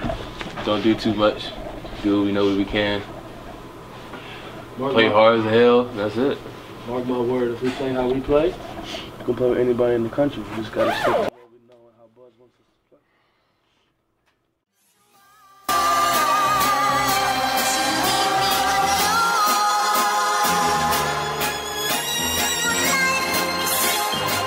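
From 11.29 to 15.69 s the sound collapses to a faint residue, roughly 32 dB down, with its centre largely gone. The likely cause is one channel inverted: reversed polarity on one side cancels the shared content once both channels are summed.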